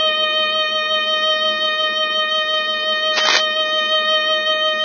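From the start, the music carries heavy damage that is likely from Vorbis compression at a very low setting, consistent with a bitrate of roughly 16 kbps. Nothing is present above 6.6 kHz, so the top end is dull, and what treble remains is quantised so coarsely that its detail turns into hiss of similar energy. Tones sound rough and grainy, and attacks are smeared rather than crisp.

From 3.16 to 3.43 s, a burst of cable scratch noise cuts across the music, likely from a worn cable or connector being moved so that its contact resistance jumps about rapidly. The fluctuating contact injects dense, irregular crackle and rustle that sits roughly as loud as the music itself, so for that quarter-second it is plainly heard as scratching layered over the sound.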